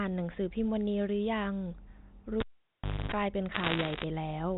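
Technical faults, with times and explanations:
2.40 to 3.12 s, cable pulled and plugged in: a pop, about 0.67 s near silence, then roughly 0.26 s of 50 Hz mains buzz as only the tip touches, another pop on reconnect.
3.52 to 4.04 s, bit errors on a digital phone line: flipped bits each corrupt single samples, so sharp ticks pile into a crackle over the speech, at roughly one or two percent error.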